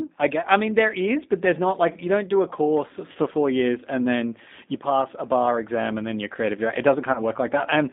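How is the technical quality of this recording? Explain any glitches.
The quality is limited by narrowband codec processing throughout, with two brief concealed dropouts.

The whole clip passes through the G.729 codec at 8 kbit/s. A predictive model rebuilds speech, so the speech sounds rough and slightly synthetic. On a spectrogram, energy sits within roughly 200 Hz to 3.7 kHz, with nothing above.

VoIP packet loss concealed by the speech codec occurs at 3.12 to 3.18 s, after "don't do a course", and at 7.13 to 7.21 s, after "you're creative director it". Each spans about 30 ms of missing audio, which fits a single lost packet. The decoder repeats its last pitch and filter with falling gain, giving a short stretched sound that fades. This shows as flattened harmonics and a dip in the waveform envelope.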